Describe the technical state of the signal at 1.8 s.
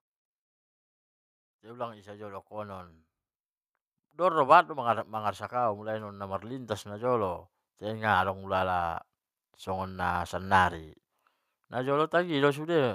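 At 1.8 s the signal is in the middle of an automatic gain rising event that runs from 1.62 to 3.0 s. The gain control judged the input too quiet and is lifting its level step by step, about 6 dB in all, so the speech and the background noise swell together rather than the voice alone. On a waveform the envelope widens steadily across that span. On a spectrogram every band, including the noise floor, brightens at once.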